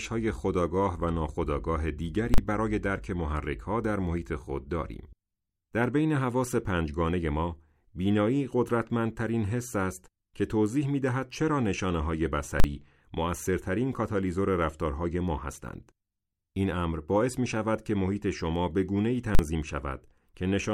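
Invalid numbers at full scale strike this speech at 2.34, 12.6 and 19.35 s. Each time, a calculation yields invalid values pinned at maximum for a 40 ms block, heard as a single loud bang.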